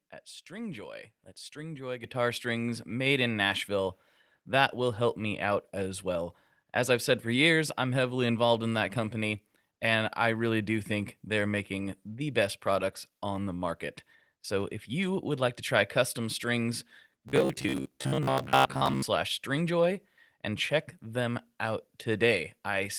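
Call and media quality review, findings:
Microphone volume stepped up, 2.04 s. Voice and background jump together by about 8 dB in a single step. The probable source is automatic input gain in the call client raising the device volume. On the waveform, the envelope widens abruptly and stays wider. On the spectrogram, every band, including the noise floor, brightens at once.

Robotic sound from repeated short buffers, 17.29 to 19.02 s. The sound becomes a rigid, metallic buzz near 66.7 Hz that still loosely tracks the speech. The likely cause is audio arriving too late, with playout filling the gaps by replaying the last 15 ms chunk, consistent with that period, while most of the real audio is skipped. On the spectrogram, harmonics are locked at 66.7 Hz spacing. On the waveform, identical segments repeat.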